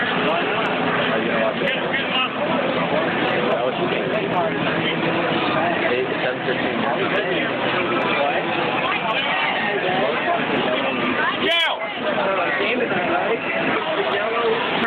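Gain pumping runs through the whole clip: the level drops on each loud sound and climbs back in the gaps, swinging by around 10 dB. The likely cause is input gain set far too high, with a fast limiter or compressor reacting to every loud sound.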